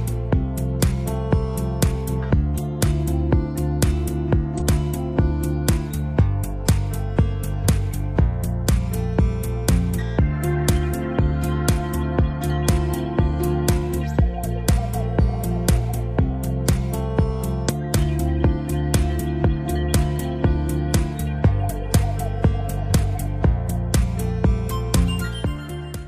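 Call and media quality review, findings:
Damaged data in a compressed stream: brief chirp or squawk at 4.55–4.62 s and 17.65–17.70 s. The decoder is misreading corrupted frames and resyncing to the next frame header.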